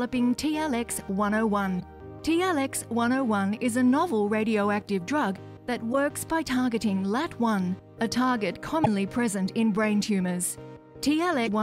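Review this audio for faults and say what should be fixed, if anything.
Damaged data in a compressed stream at 1.77–1.82 s, 5.89–5.95 s, 8.82–8.87 s and 11.43–11.49 s: each brief blip of about 56 ms is where corrupted frames were misread or rejected, so the decoder lost sync and hunted for the next valid frame header. To prevent it, protect the file or stream with checksums and error-checked transfer, and replace any corrupted copy with a clean one.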